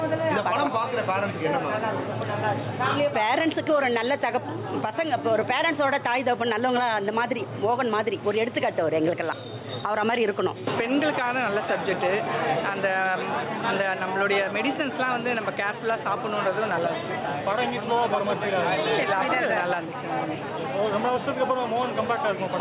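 From start to finish the level pumps with a breathing motion and a swing of around 10 dB. Loud and quiet passages sit unnaturally close in level, and the whole clip sounds squashed. This is gain pumping, and the likely cause is input gain set far too high with a fast limiter or compressor clamping down on every peak. Nothing is heard above 4 kHz, which fits a narrowband call codec such as G.711 mu-law.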